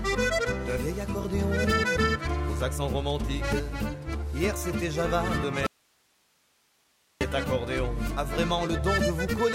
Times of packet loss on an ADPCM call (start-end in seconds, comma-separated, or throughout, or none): none